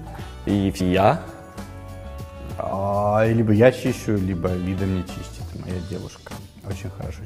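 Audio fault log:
0.79 s, 2.72 s and 6.37 s: compressed frames skipped. Runs of compressed frames were missing or rejected by the decoder, so playback jumps ahead about 150 ms, 150 ms and 200 ms.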